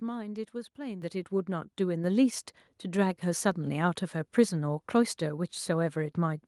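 At 1.02 s the microphone volume stepped up: the call software judged the input too quiet and raised the device's input level in a single jump of about 8 dB. The speech and the background noise behind it become louder together, instantly, with no fade. At 2.04 s the same adjustment happens again, adding about 5 dB more, so the sound climbs in two distinct stairs rather than a smooth rise.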